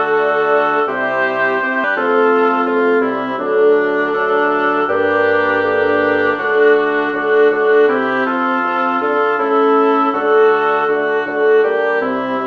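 At 1.84 to 1.86 s there is a skip ahead: around 0.4 s of audio was dropped while later material was already queued, and playback jumps forward with no inserted fill. The two sides of the missing stretch are joined almost directly, giving an abrupt discontinuity.

From 1.93 to 2.77 s a jitter buffer speed-up follows, as the buffer sheds the excess delay by repeatedly removing pitch-period-length pieces, roughly a tenth of a second in total. The sound runs at about 110% speed with unchanged pitch, so this stretch sounds hurried. Throughout, the band stops at 8 kHz, which fits a wideband call codec such as G.722.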